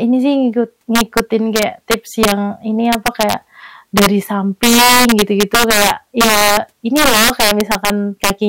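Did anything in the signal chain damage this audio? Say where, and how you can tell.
Yes. Integer overflow in a fixed-point gain or sample-format conversion stage affects the whole speech clip. The level was pushed about 9 dB past full scale, and the few percent of peaks above the limit wrapped to the opposite sign, producing harsh cracks far sharper than ordinary clipping.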